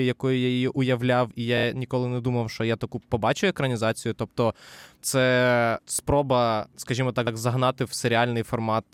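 At 1.57 s, just after "я її уявляв і", a 26.1 ms block plays three extra times, which fits a single compressed frame. At 7.27 s, after "це спроба скажімо", a 78.4 ms block, consistent with a short run of frames, plays once more. Both are repeated frames, heard as brief stutters, each adding 78.4 ms.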